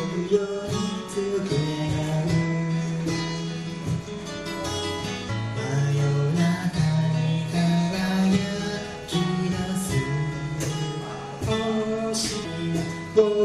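At 5.28 s a brief burst of damaged data in a compressed stream gives a short chirp, squawk, click or hole, because the decoder misreads the corrupted frame and briefly loses sync.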